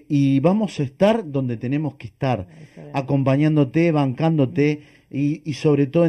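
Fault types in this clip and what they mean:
Channel delay (comb filtering): one channel lags the other by roughly 0.4 ms before mono summing, carving regular notches from around 1.5 kHz that leave the speech hollow and phasey throughout.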